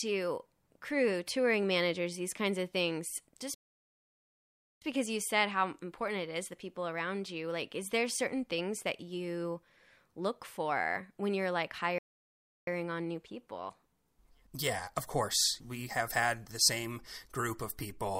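At 3.54 s, right after "kinds of things just", the speech cuts to silence for about 1.27 s and picks up at 4.82 s with "because you said how". Same thing again at 11.98 s after "for when you're like", a 0.69 s gap before "on new people" at 12.67 s. Both are playback stalls: the player likely ran dry of data or got its thread blocked, so output just stopped mid-flow until it caught up.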